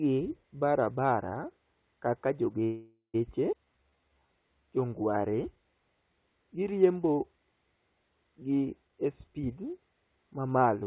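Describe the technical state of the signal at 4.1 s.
Sound is stretched here, running at 78% speed with unchanged pitch. This is a jitter buffer slow-down from 3.65 to 4.28 s, where repeated pitch periods add 151 ms to rebuild the buffer reserve.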